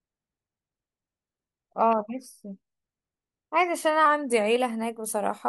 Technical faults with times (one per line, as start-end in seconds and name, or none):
4.06-4.56 drift correction step